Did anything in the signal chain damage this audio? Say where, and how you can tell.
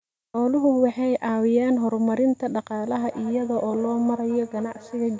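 Yes. Feedback echo between two devices, in the call path: from 2.97 s on, the speech repeats roughly every 200 ms, about 19 dB down. Another device's playback re-enters this microphone, which its echo canceller cannot remove.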